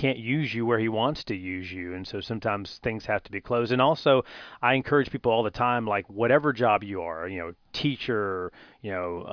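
A recording of speech with nothing technically wrong anywhere in it. No dropouts, distortion, noise bursts or timing problems can be heard at any point.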